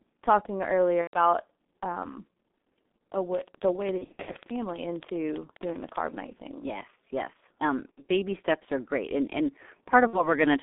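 Speech carried over a G.723.1 codec, with heavy damage throughout: nothing is heard above about 3.6 kHz or below about 200 Hz, and the voice sounds muffled and hoarse with smeared consonants. Unlike a simple telephone band-limit, the roughness comes from a coarse voice model refreshed only every 30 ms, which fits the low 6.3 kbit/s mode. VoIP packet loss, concealed by the speech codec, breaks in at 1.01–1.18 s, 3.98–4.37 s, 7.92–8.03 s and 10.07–10.29 s. The longest, near 4 s, is a cluster of short losses spread over roughly a third of a second. In each, the decoder repeats its last pitch and filter while fading the gain, so the sound stretches into a fading buzz or noise, and in the four-frame run at 1.01 s it is muted from the third lost frame. The voice stays weak for a moment after each loss, because every frame is built on the concealed one before it.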